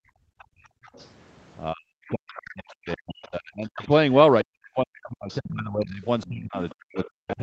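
From 0 to 0.83 s the background is gated by the echo canceller: while the loudspeaker plays, the room tone is pulled down by about 31 dB for roughly 0.7 s. On a waveform the noise floor collapses to near silence, and a spectrogram shows a dark gap.

Between 0.38 and 1.11 s the other side's voice leaks through. It is faint, about 30 dB below the speech, as a second voice, likely residual loudspeaker echo that the canceller did not fully remove. On a spectrogram it appears as faint, separate harmonic traces.

From 1.73 to 3.89 s the speech is suppressed in double talk. For about two seconds the voice dips, at worst by around 40 dB. The likely cause is the canceller turning down both sides at once. The waveform shows shrunken stretches.

Within that stretch the other side leaks through again, at 2.08 to 3.28 s and 3.81 to 3.87 s, roughly 25 dB down.

From 4.43 s to the end the double-talk suppression returns with similar deep dips of around 40 dB. 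Further leaks sit at 5.29 to 5.51 s, about 20 dB down, and 6.21 to 7.08 s, about 25 dB down. Throughout the clip, the call path's band limit leaves nothing above 8 kHz on the spectrogram.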